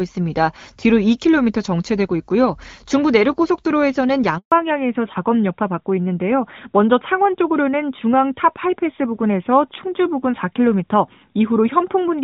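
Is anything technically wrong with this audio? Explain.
Yes, there are two faults, one right after the other.

At 4.38 s the speech drops out completely for 140 ms, until 4.52 s. It fades out within a few tens of milliseconds, and whatever was said in that window is gone. This is a handover gap: the call was being passed from one network to another, and no speech frames got through while the link switched, so the decoder had nothing to play until the new connection carried audio.

From 4.52 s to the end, the speech sounds duller, boxier and rougher than before. This is a fallback to narrowband: the call left HD Voice and continued on an older telephone-band codec, which cannot carry anything above 4 kHz, so the upper range that gave the first part its clarity disappears. Before the switch, the speech has the wider band and clean sound of AMR wideband, which fits a rate around 12.65 kbit/s. 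After it, the sound fits AMR narrowband at around 12.2 kbit/s, the likely codec.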